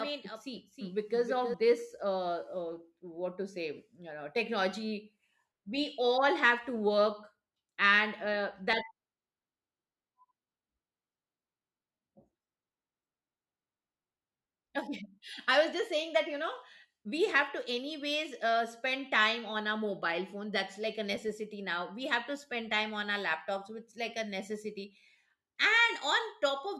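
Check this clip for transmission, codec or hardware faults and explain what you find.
One fault is present. A doubled audio track runs from the start of the clip to 1.54 s. A second full-band copy of the speech trails roughly 300 ms behind, about 5 dB quieter, likely from a slower second capture path. It carries no room colour and cuts out abruptly.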